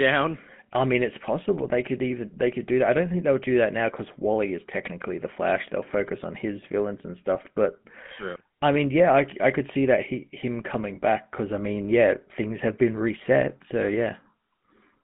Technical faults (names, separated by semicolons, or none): GSM full-rate codec; GSM bit errors